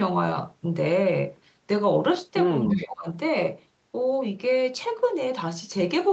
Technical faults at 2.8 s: echo leak; speech suppressed in double talk

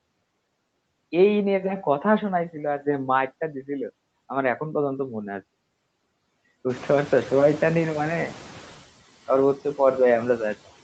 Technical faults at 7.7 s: noise suppressor artifacts; noise suppressor catching up

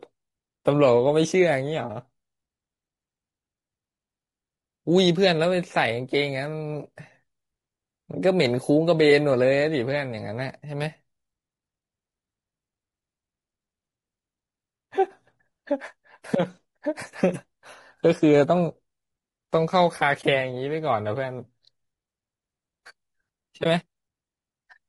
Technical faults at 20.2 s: low-delay AAC compression; AAC frame loss with muting

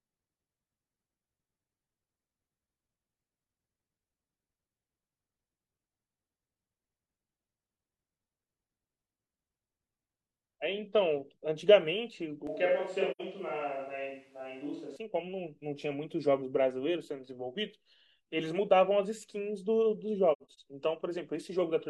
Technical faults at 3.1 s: none

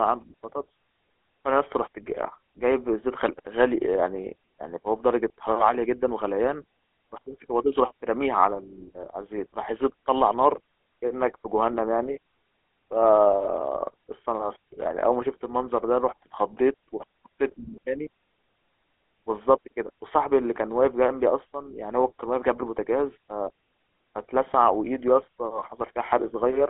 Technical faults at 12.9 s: GSM full-rate codec

